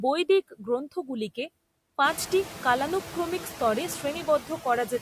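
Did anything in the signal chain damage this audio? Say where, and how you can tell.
Yes. The damage comes from call processing, in the form of noise suppressor artifacts across the whole clip. The suppressor pulls the noise floor down by about 9 dB. It works frame by frame, cutting the bands it judges to be steady noise. So the background drops in the gaps between words and comes back up under them. This pumping is easiest to hear after the room noise rises by about 16 dB around 2 s.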